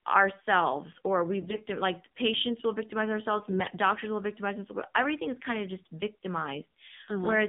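Speech that sounds boxed-in, buzzy and plainly synthetic throughout, with nothing above about 3.7 kHz and little below 150 Hz, is the AMR narrowband mobile codec at work. Its vocal-tract model, driven by sparse pulses and running at a low rate, fits the 7.4 kbps mode. From 1.39 to 1.62 s and again from 3.40 to 3.75 s the voice keeps its pitch and level but turns hoarse, scratchy and gargly. These are AMR bit errors. Corrupted low-priority bits, a few percent of them, misplace the excitation pulses and skew the gain and spectral values. The damage spans roughly 11 and 17 frames respectively.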